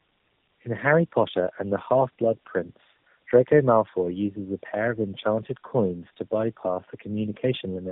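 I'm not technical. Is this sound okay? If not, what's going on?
No. This call suffered tandem speech coding: it passed through three speech coders in a row, and each one squeezed and unpacked the speech again. That stacks the damage, so the speech sounds rough, muffled and warbly throughout, with nothing above 3.8 kHz.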